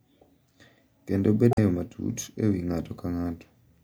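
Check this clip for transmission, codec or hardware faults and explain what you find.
There is one fault in this speech clip. From 1.51 to 1.58 s, just before "matut e", damaged data in a compressed stream corrupts frames, and the decoder misreads them and loses sync while it hunts for the next valid frame header. The result is a brief chirp, squawk, click or short hole of about 80 ms.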